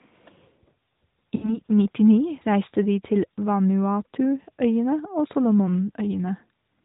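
From 1.36 to 1.59 s, lost AMR speech frames interrupt the speech: a burst of radio errors corrupted about 60 ms of coded audio, which fits three consecutive 20 ms frames. The narrowband AMR decoder filled the gap by repeating the last good pitch and vocal tract settings at falling gain. The speech stretches unnaturally, fades toward silence, then resumes weak or rough for a moment before the light codec colouring of the surrounding audio returns.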